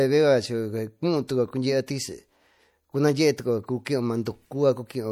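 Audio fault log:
Throughout, MP3 compression: the speech carries plainly audible codec damage, with nothing above 20.8 kHz. The likely cause is an MP3 encoder short of bits, a level of damage that fits a bitrate around 64 kbps. The coder divides the signal into narrow frequency lines and drops the weaker ones when the budget is tight. Those lines flicker in and out between frames, giving the watery, swirling texture and blurred onsets heard across the clip.
1.28 s, 3.85 s and 4.25 s, pre-echo: each of these three sharp onsets in the speech is preceded by a short hiss lasting about 15 ms, 11 ms and 10 ms respectively. The codec spreads its quantisation noise across an entire transform block. When a sudden attack lands late in that block, noise scaled for the loud moment leaks into the quiet just before it. That leak is the brief hiss, and it leaves each attack sounding softened and smeared rather than crisp.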